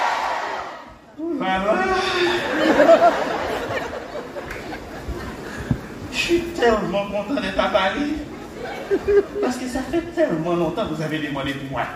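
No technical faults turn up anywhere in the audio.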